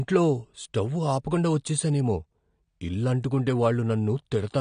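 A short speech recording carries AAC compression damage from start to finish, plainly audible as a dull, smeared tone with a warbling, fizzy edge on sibilants and held sounds. Nothing survives above 9.7 kHz, which fits a bitrate around 32 kbps, and the likely cause is AAC-LC coding that dropped the top band and starved the rest of bits. A spectrogram would show a hard ceiling at 9.7 kHz.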